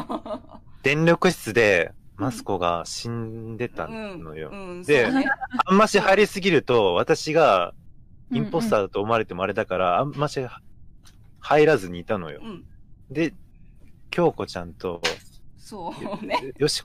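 Nothing stood out on listening; no technical fault could be heard anywhere in the audio.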